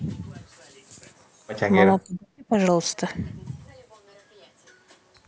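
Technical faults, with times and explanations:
1.99–2.53 s: speech suppressed in double talk. The speech falls away by roughly 40 dB at its deepest and breaks up for about half a second. The likely cause is an echo canceller that mistook the talker for loudspeaker echo while both sides spoke, and turned both down.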